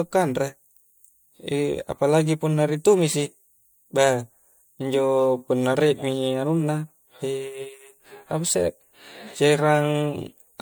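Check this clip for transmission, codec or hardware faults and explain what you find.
One codec fault runs through the whole speech clip. Generation loss: the sound is swirly, smeared and hollow, with blurred attacks. That likely comes from about three MP3 passes at roughly 96 kbit/s, each adding fresh quantisation noise.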